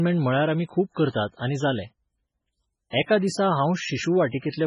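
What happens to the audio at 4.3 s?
At 4.30 s a sharp attack in the speech is preceded by pre-echo, a short hiss smeared ahead of it until about 4.33 s, roughly 32 ms. A transform codec spreads its quantisation noise evenly across each block. When the onset lands late in a block, noise sized for the loud part spills into the quiet gap before it, so the attack arrives soft and blurred, with a brief wash of grit leading into it.

That block noise sits on top of band-limited, heavily degraded audio. Nothing is present above 10.5 kHz, and the remaining upper content has a watery, swirling texture, with weak spectral detail flickering in and out between frames. The likely cause is MP3 compression at a very low rate, which fits something around 16 kbps. The encoder starved of bits, discarded the treble wholesale and zeroed quieter frequency lines, leaving sibilants metallic and attacks smeared.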